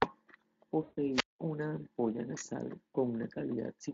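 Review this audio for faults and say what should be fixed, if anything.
From 0.83 to 0.98 s the speech smears and fades before "una ampolla nasal". This is VoIP packet loss concealed by the speech codec: about 140 ms of audio went missing, which fits roughly seven 20 ms frames, and the decoder extrapolated the last pitch with falling gain. Prevent it with a jitter buffer, forward error correction or a more reliable network path.

From 1.12 to 1.39 s a short rise of hiss gives way to near silence for about 190 ms, then the speech resumes with "una ampolla nasal". This is a wireless microphone squelch dropout: the FM signal weakened until the receiver's squelch muted the output. Prevent it with diversity receivers, shorter line-of-sight distance, or fresh transmitter batteries.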